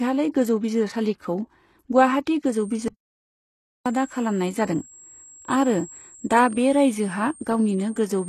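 From the start, the speech carries heavy HE-AAC compression artefacts, likely from a low-bitrate encode around 16 kbps. Everything above 12.3 kHz is missing, and the treble below that sounds synthesised from copied lower bands, so s sounds come out gritty and metallic.

At 2.88 s the audio drops out to complete silence, with no room tone, until 3.86 s. The gap of about 0.98 s points to a lost input signal, likely a momentary disconnection, while recording continued writing silence.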